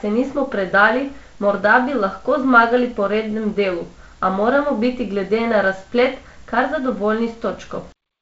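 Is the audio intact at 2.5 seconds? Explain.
Yes, the audio is intact at 2.5 seconds, with no fault at that moment.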